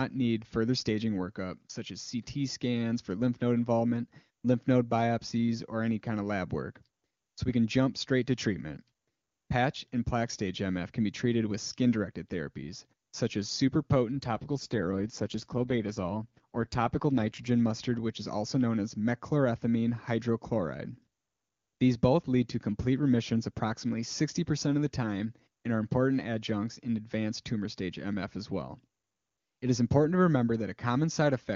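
From 14.18 to 17.51 s the speech turns rough and buzzy, then clears again. This is an AMR rate drop: a weak radio link made the network switch the wideband codec down to a low mode so more bits could go to error protection. The roughness fits a fall from the clean 23.85 kbit/s AMR-WB rate around it to roughly 8.85 kbit/s. A bandwidth fallback would dull the sound and a dropout would leave a gap, but here the full band and continuity remain and only the texture degrades.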